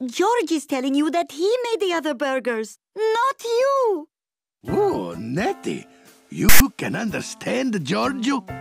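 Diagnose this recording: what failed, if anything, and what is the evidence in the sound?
A storage-stage failure: file tags played as audio. From 6.49 to 6.60 s a hard-edged rasp, offset to one side, cuts in. Text bytes from a tag block were read as samples. Unlike a dropout or packet burst, it starts and stops instantly with DC-like asymmetry.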